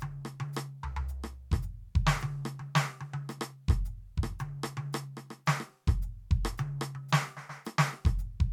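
No technical faults can be heard anywhere in this music. Nothing in it calls for a time or a value to be marked.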